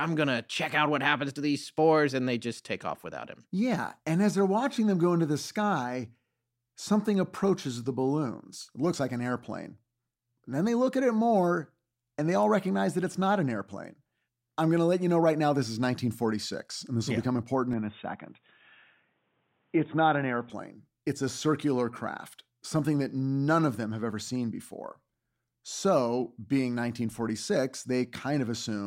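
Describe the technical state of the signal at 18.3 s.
Likely an input switched to a poorer device from 17.73 to 20.50 s: the narrower path cuts everything above 3.8 kHz, so the speech turns dull and boxy, with faint added noise.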